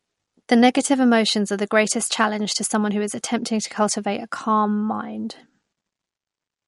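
Throughout, the speech sounds watery and swirly, with nothing above 11.2 kHz. That points to likely MP3 compression, starved of bits at roughly 47 kbps.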